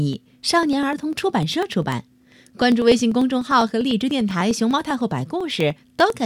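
From 0.13 to 6.20 s, periodic USB or driver dropouts skip a fraction of a millisecond of audio every 0.0995 s, giving regular ticks through the speech.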